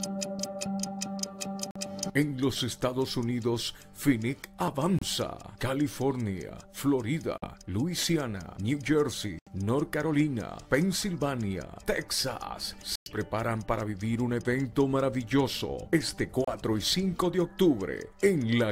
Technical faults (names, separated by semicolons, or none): Bluetooth dropout